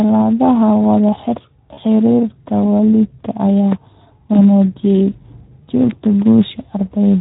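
Right from the start, the whole clip carries Speex codec coloring. The speech sounds hoarse and grainy, with a rough, noisy edge. That fits a CELP coder running at around 11 kbps, where there aren't enough bits to describe the excitation cleanly. The result is a rough, noisy texture that never goes away.

At 1.73 to 1.84 s there's VoIP packet loss concealed by the speech codec. About 40 ms of audio went missing, which fits two lost 20 ms frames. The decoder filled the gap by carrying forward its last pitch and filter shape and turning the gain down as it went, so you hear a stretched smear that fades. The speech then takes a moment to firm up again because each frame leans on the previous one.

At 3.72 to 3.74 s a loud pop cuts in, a sharp click roughly 10 dB above the speech, with the talking continuing underneath it. It's likely a voltage step or pulse from a plug, switch, static discharge or driver glitch getting into the signal.

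At 4.33 to 4.38 s there's another concealed loss, shorter this time at about 20 ms, consistent with a single dropped frame. It gives a brief smeared, faded patch.

At 5.91 to 5.93 s a second pop lands, milder at about 5 dB above the speech, on top of it.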